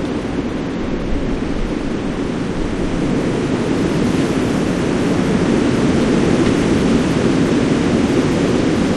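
No technical faults can be heard anywhere in this recording of sounds; the signal stays steady and intact throughout.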